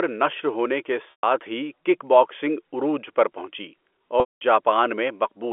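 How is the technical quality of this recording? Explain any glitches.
Two dropouts mark the telephone-band speech, which runs through G.711 coding with nothing above about 3.4 kHz. Both come from packet loss with pitch repetition. The first runs from 1.11 to 1.23 s, about 120 ms, just before "ہی کِک باکسنگ عروج". The second runs from 4.20 to 4.41 s, about 210 ms. Audio packets went missing. The receiver looped the last pitch cycle to fill each gap and faded it out. The longer one fades toward silence before speech returns.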